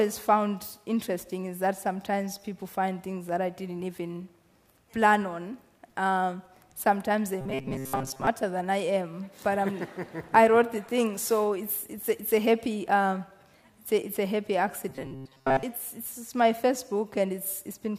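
At 7.41 to 8.27 s, and again at 14.89 to 15.64 s, the sound turns robotic, a rigid metallic buzz locked at 133 Hz. It's likely repeated short buffers: a chunk of about 7.5 ms gets looped for most of each stretch while the fresh audio is skipped.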